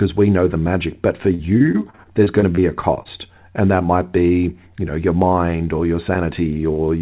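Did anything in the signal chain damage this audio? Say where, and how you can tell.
Yes, at the network stage: repeated packet loss (robotic sound) from 1.34 to 3.07 s, after "the magic but for". Fifteen gaps up to 49 ms are filled with repeated sound, not silence, unlike plain dropouts.

The jitter buffer speed-up runs from 4.53 to 5.13 s, between "that might be" and "mind or your". Pitch periods were trimmed, about 50 ms in all, for 108% speed. Pitch stays unchanged, unlike resampling.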